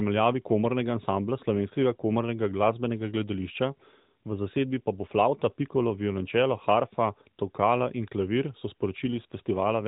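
Nothing in this speech recording registers as a technical fault: the narrow, telephone-like band with no content above 4 kHz and the light coding texture of the AMR narrowband mobile codec sound as that path normally does, which fits its 12.2 kbps mode.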